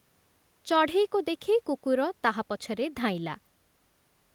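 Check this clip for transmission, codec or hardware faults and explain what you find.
No faults turn up when this clip is checked.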